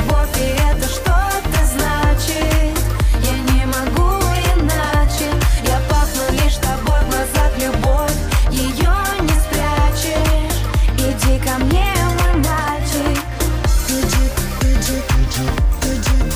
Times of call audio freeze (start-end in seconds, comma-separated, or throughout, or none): none